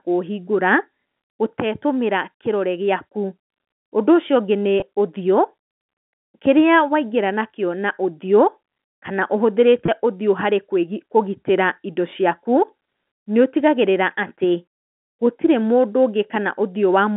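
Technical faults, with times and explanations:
4.80–4.82 s and 9.86–9.88 s, packet loss with pitch repetition: about 20 ms drops out each time, which fits one lost packet. The decoder repeats the last pitch period to fill it, so you get a tiny held buzz in the narrowband phone audio.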